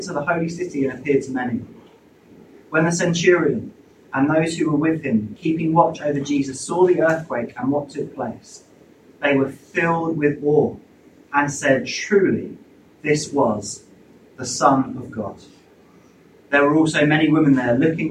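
Nothing wrong here: no dropouts, glitches, distortion or level jumps turn up anywhere in the recording.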